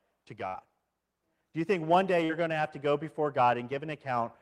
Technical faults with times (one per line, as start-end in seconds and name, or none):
0.47-0.57 burst of packet loss
2.25-2.45 short concealed packet loss